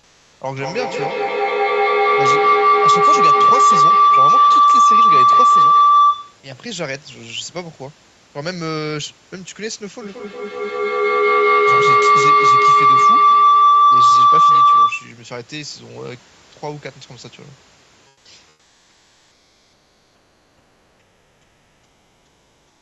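Speech with comfort noise in place of the background at 0 to 0.31 s, 18.07 to 18.25 s and from 18.49 s to the end: the room's textured background becomes a steady, featureless hiss about 4 to 5 dB quieter, likely from Opus DTX. Unlike a noise gate, these pauses never fall fully silent.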